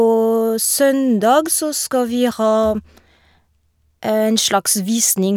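No dropouts, clicks, distortion or other transmission faults are audible anywhere in the recording.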